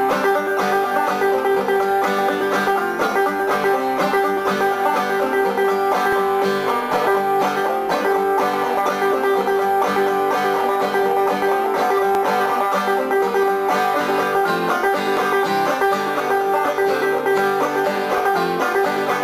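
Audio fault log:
0.11 to 18.18 s, clock drift buffer slips: a click lands every 3.02 s, about seven in all. The likely cause is two devices on separate clocks drifting apart by roughly 200 ppm, so the buffer between them overflows or runs dry and drops or repeats a few dozen samples each time.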